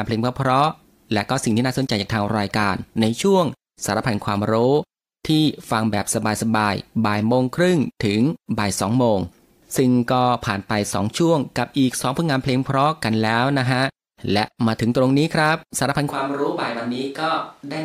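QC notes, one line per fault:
16.11 s to end, switch to a distant microphone: the speech turns abruptly roomy and hollow, thinner in the bass, about 5 dB quieter, with room noise more audible. The likely cause is the close microphone dropping out; unlike a plain gain drop, the tone and room change too.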